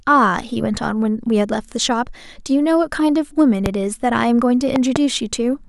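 A loud pop cuts through the speech from 3.66 to 3.68 s, then a double pop from 4.76 to 4.98 s, each roughly 15 dB above the speech, likely from a switch, plug or static discharge injecting a voltage pulse. Each shows as a tall waveform spike and a thin, full-height spectrogram stripe, with the speech continuing beneath.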